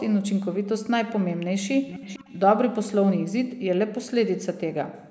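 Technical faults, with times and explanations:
1.87–2.4 s, echo leak: a faint delayed copy of the speech, well below the direct voice, trails it by about 0.45 s. This is likely a far-end loudspeaker echo the canceller failed to remove. On a spectrogram it shows as weaker, time-shifted duplicates of the speech harmonics.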